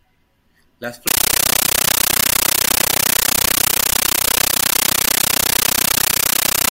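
At 1.07 s the speech gives way to a compressed stream played as audio. An AC-3 bitstream, apparently high-bitrate, is being treated as plain samples. What you hear is very loud chattering static to the end. On the waveform it shows as 13.3 ms noise bursts with flat silence between them, repeating 31.25 times a second. A spectrogram shows full-band vertical stripes.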